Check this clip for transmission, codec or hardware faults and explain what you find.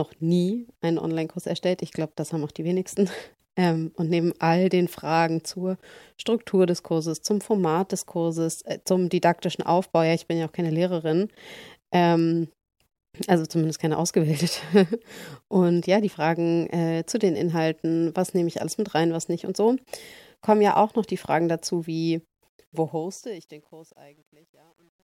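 One fault is present: truncation distortion on a fade, from 22.42 s to the end of the clip at 25.19 s, right after "dazu wie". Roughly 2.8 seconds from the end, the speech starts a fade-out, but the fading sound turns gritty. From 23.23 s to the end the grit is at its worst. The fade stage drops low-order bits without dither, which fits a 10-bit stage. As the level nears its smallest steps, the waveform collapses into a few coarse square steps.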